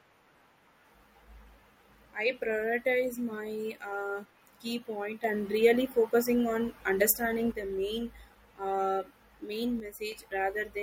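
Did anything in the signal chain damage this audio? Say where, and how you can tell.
Yes. There is a sudden gain jump at two points. From 5.24 to 7.52 s the speech and the background noise step up together by about 6 dB, then drop back. From 9.8 to 10.12 s both fall by about 6 dB before returning. The steps are instant, with no fade, and the noise floor moves with the speech. That most likely points to a digital gain or bit-shift change applied without a ramp in the driver or processing stage.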